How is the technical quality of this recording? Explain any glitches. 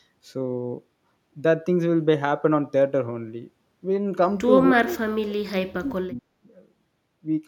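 The speech clip has one clear glitch: speech suppressed in double talk, from 4.63 to 6.31 s. Across that stretch the talker's level collapses in pieces, with the deepest dips falling something like 40 dB and about a second and a half of the span pulled down or cut out. The likely cause is an echo canceller that, with both ends talking at once, could not tell this voice from loudspeaker echo and turned everything down.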